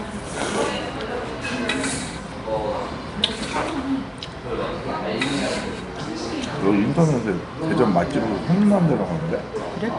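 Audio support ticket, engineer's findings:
Nellymoser compression, throughout: rough, hissy halo and smeared, underwater texture, plainly audible, nothing above 10.6 kHz. Likely Flash-era Nellymoser Asao encode at a rate that fits about 44 kbps. Fixed bit budget per 256-sample block starves weak bands, which are refilled with noise.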